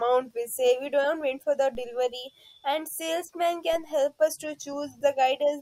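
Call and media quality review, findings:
DC step at 1.75 s. Waveform zero line jumps by about −36 dBFS, then bleeds away through a roughly 2 Hz high-pass in the input chain. Probable cause is converter recalibration or an offset input being switched in. Heard as a single low thump or click in the speech, with the speech itself unaffected and the offset fading over a fraction of a second.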